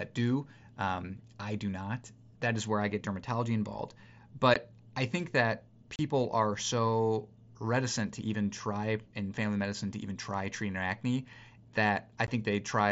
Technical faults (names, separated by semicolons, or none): unconcealed Bluetooth headset packet loss